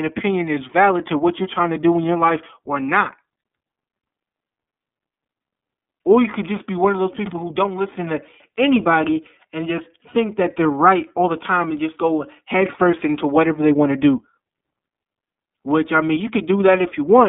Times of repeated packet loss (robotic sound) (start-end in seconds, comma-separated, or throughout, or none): none